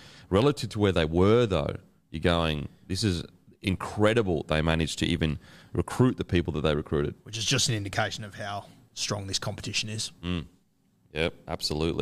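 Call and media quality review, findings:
No audible faults found.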